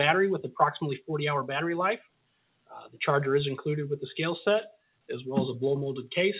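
Nothing is technically wrong with the clip, which carries the narrow band of a G.711 A-law call path with nothing above 4 kHz.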